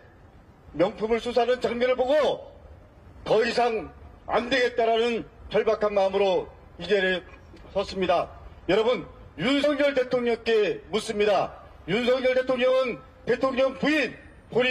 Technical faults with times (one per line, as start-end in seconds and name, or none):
9.63 compressed frames skipped